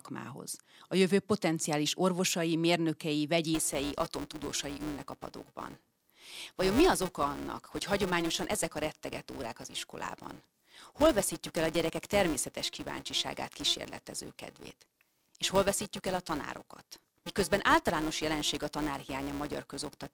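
From 3.54 s, right after "jövő potenciális orvosai mérnökei", and running to the end of the clip, a filter restarted on every block loses its memory between chunks and begins each one from silence. Each restart leaves a small transient, heard as a buzz near 345 Hz, which fits a 128-sample block, rising and falling with the speech level. A waveform shows evenly spaced glitches at every block boundary; a spectrogram shows a harmonic comb based at 345 Hz, brightest where the speech is loud.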